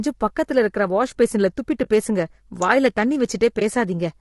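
Low-delay AAC compression runs through the whole speech clip. It is most likely AAC-ELD, whose short frames resolve pitch harmonics poorly. The voice sounds plainly rough and grainy, with noise filling the gaps between harmonics, which points to a bitrate around 32 kbps.

AAC frame loss with muting occurs from 1.83 to 1.88 s and again from 3.59 to 3.62 s. Each time, about 20 ms of coded audio went missing and the decoder zeroed it. The overlapping windows fade the sound down and back up, leaving a brief dip each time.

An electrical switching spike lands at 2.62 s. It is a sharp snap sitting on top of the speech, likely an arc from a nearby switch or static discharge picked up by the audio line.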